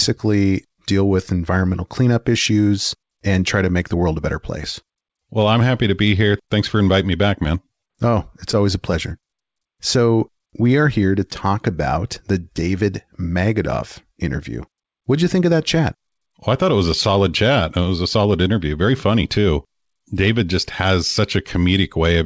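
At 7.88 to 7.91 s there is a short concealed packet loss. About 20 ms of audio arrived too late. The receiver filled the gap by extending the preceding sound, then blended back. It is heard as a brief smear. The call path itself shows nothing above 8 kHz.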